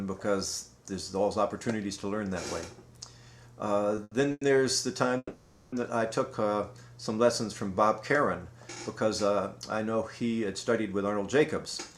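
The audio shows a cluster of late-packet problems in its first half and a catch-up near the end. Two short stalls from a late packet occur at 3.95 to 3.99 s and 4.03 to 4.13 s. In each, the sound is held in place rather than dropping out: about 20 ms of stretched fill in the first and 80 ms in the second. The receiver had nothing new to play, so it prolonged the last sound and then resumed from the same point. Nothing is lost, but the sound lingers with a faint buzzy quality, and the playout delay grows by those amounts. Two call audio freezes follow, at 4.31 to 4.43 s and 5.17 to 5.74 s. The first fills 100 ms with a continuation of the preceding sound that decays into about 20 ms of silence. The second is longer at 550 ms, again fading into about 30 ms of silence before normal playback picks up where it left off. The likely cause is a run of packets held up in transit, draining the jitter buffer, so these gaps are inserted into the stream rather than replacing any of it. 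From 10.93 to 11.40 s, a jitter buffer speed-up plays the audio at about 108% of normal rate with the pitch unchanged. The buffer held more audio than its target, so the receiver trimmed repeated short pitch-period slices, around 50 ms in total, giving a slightly hurried feel.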